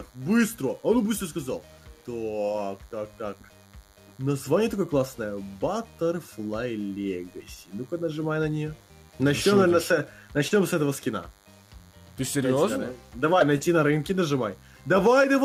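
A DECT cordless phone buzz runs throughout. A nearby handset bursts every 10 ms, rectified by the audio circuit: a thin 100 Hz buzz, well below the sound.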